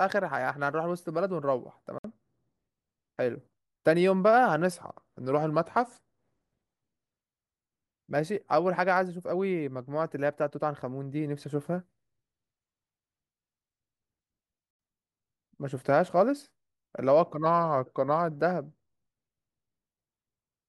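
At 1.98 to 2.04 s the speech drops into a block of digital silence, 59 ms long. The output buffer likely went unfilled, so samples became zeros. The sound stops dead and resumes, heard as a short hole.

From 4.72 to 6.19 s a drift correction step slows playback by 5.7%. Pitch falls 102 cents, about a semitone. A clock-matching routine likely changed the rate at once. The speech sounds detuned.

At 14.71 to 14.79 s another block of digital silence appears, 83 ms long. It has the same abrupt edges and a longer hole.

From 17.44 to 18.31 s the same detuning returns: 5.7% slower and 102 cents flat.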